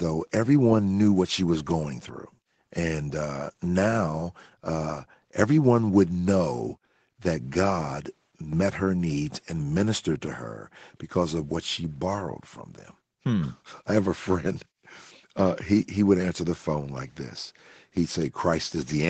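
No faults can be heard in this speech, which carries the ordinary character of a call path, with nothing above about 8 kHz and the lowest bass taken out by the microphone processing.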